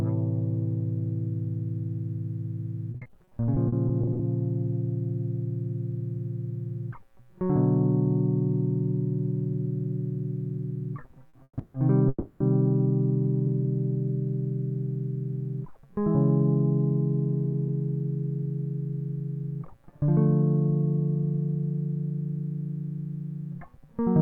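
Repeated packet loss (robotic sound) runs through this music clip from 2.91 to 4.21 s: a quick series of short holes, none longer than 50 ms, is patched by extending the preceding sound, so about a quarter of that stretch is filler, roughly 240 ms of audio is missing, and the music turns choppy. A short stall from a late packet at 11.29 to 11.35 s holds the sound for 40 ms while the jitter buffer waits, then resumes exactly where it paused, with nothing lost. A call audio freeze follows in three pieces, at 11.43 to 11.59 s, 11.59 to 11.76 s and 12.08 to 12.42 s. Each holds a fading buzz or hiss of 140, 150 and 320 ms, and the first drops to silence for its last 40 ms. Playback then continues from the point where it stopped, so the music is delayed rather than cut, likely because packets were held up in transit and the jitter buffer ran dry.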